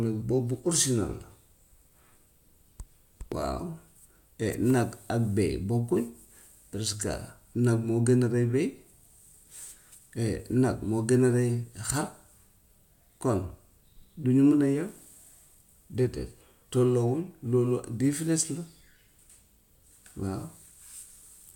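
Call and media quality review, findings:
No audible transport or processing faults were found on the speech signal, which stays continuous with steady level and timing throughout.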